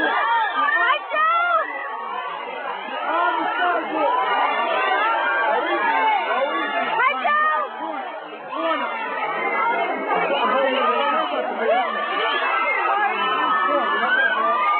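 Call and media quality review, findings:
Repeated frames, 1.79–1.81 s: brief stutter, the same 23.2 ms slice of sound heard twice back to back. Probable component is the encoder output or transport writing one compressed frame twice; the decoder replays it, adding 23.2 ms. Unlike a dropout or concealment, nothing is missing. The content repeats exactly and the timeline grows, rather than a gap, a fade or a smeared, synthesised fill.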